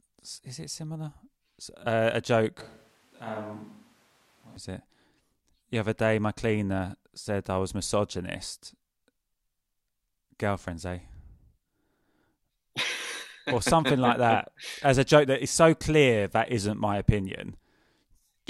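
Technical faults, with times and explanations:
2.61 to 4.57 s, switch to a distant microphone: the sound suddenly turns roomy, hollow and thin in the bass, about 10 dB quieter. Room noise sits only about 25 dB below the speech. The close microphone likely dropped out. The switch comes just before "is it".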